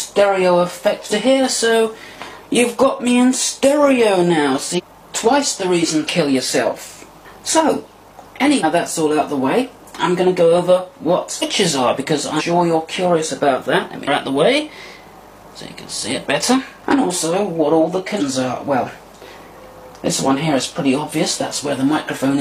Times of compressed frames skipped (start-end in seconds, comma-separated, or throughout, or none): 1.07-1.12, 4.74-4.81, 6.04-6.09, 8.59-8.64, 11.38-11.43, 12.36-12.42, 14.03-14.08, 18.16-18.22